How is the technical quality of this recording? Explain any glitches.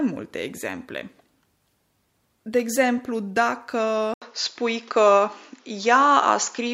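The recording has one glitch, running from 4.14 s to the end. Input switched to a poorer device at 4.14 s, likely a mid-recording change of microphone. After an 80 ms silence, the speech returns duller and boxier, with nothing above 7.2 kHz. Its level shifts by around 5 dB, and a new, faint background noise sits well below it.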